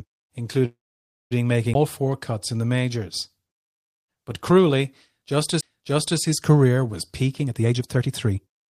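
At 0.65 s the sound stops and its last moment stretches into a fading buzz. Silence follows for about 0.55 s. At 1.33 s the audio resumes exactly where it broke off, with nothing lost. This call audio freeze likely means delayed packets emptied the jitter buffer.

A CD skip lands at 1.74 s and another at 5.61 s. Each is a tick with a very brief mute. The sound then carries on from a different point. The laser has jumped to another turn of the disc's spiral.

From 7.40 s to the end, the sound runs at about 133% speed. The pitch stays the same, but the pace feels hurried. This is a jitter buffer speed-up. The buffer held too much audio, so short pitch-period slices were cut out repeatedly to reduce the delay.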